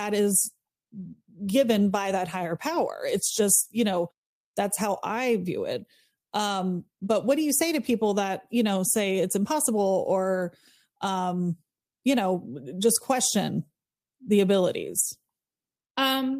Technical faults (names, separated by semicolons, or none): none